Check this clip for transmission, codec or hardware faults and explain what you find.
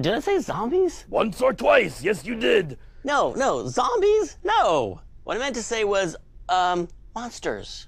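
No faults found.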